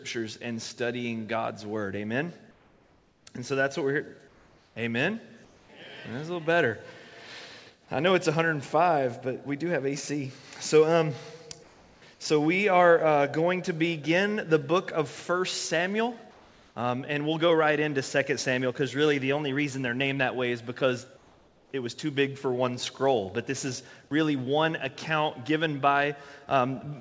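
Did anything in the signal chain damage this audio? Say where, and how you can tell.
Yes, in call processing. In the pauses at 2.51–3.26, 4.28–4.76, 5.45–5.69, 11.63–12.02, 16.31–16.76 and 21.17–21.71 s, the real background turns into flat, featureless hiss about 2 to 4 dB quieter. That's comfort noise in place of the background, likely the sender going silent and the receiver synthesising filler.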